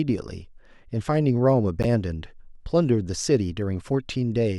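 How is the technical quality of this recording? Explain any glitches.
One glitch affects the speech recording: a corrupt frame decoded from 1.83 to 1.85 s. Flipped bits in a single compressed frame led the decoder to apply wrong gains or misread codes, putting energy at wrong frequencies. It is heard as a short chirp, squeak, blip or burst of noise, its error peaking near -10 dBFS.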